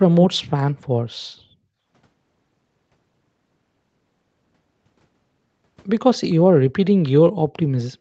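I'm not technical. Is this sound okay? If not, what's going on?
No. There's a brief echo leak: a faint, delayed copy of the speech, about 0.3 s late, at 0.22 to 0.35 s and again, even fainter, at 7.03 to 7.09 s. It's a separate repeat, not room reverberation, likely from a loudspeaker's sound getting back into the microphone.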